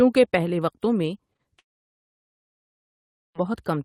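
At 1.33 s and again at 1.37 s, running to 1.41 s, there is a short smeared wobble as the sound briefly stretches and blends back. These are two back-to-back cases of short concealed packet loss: about 20 ms of audio went missing each time, and the decoder bridged the gaps by extending the preceding sound.

From 1.59 s to 3.36 s a brief fading tail gives way to about 1.7 s of silence before sound resumes. This is likely a long network dropout, with that stretch of audio lost rather than delayed.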